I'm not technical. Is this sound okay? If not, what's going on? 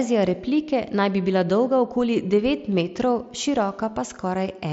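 Yes, nothing in this speech recording sounds wrong.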